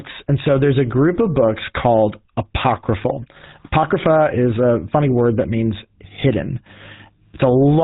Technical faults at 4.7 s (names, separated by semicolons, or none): GSM full-rate codec